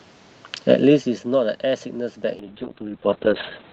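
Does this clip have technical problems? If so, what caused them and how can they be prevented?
Yes. A call bitrate drop starts at 2.4 s and lasts to the end. The speech turns rough and muffled. Content above 4 kHz disappears, where it reached 8 kHz before. The coarser Opus coding fits a fall from about 32 to 6 kbps after the bandwidth estimate collapsed. Preventing it takes a steadier network path, or a higher minimum bitrate for the encoder.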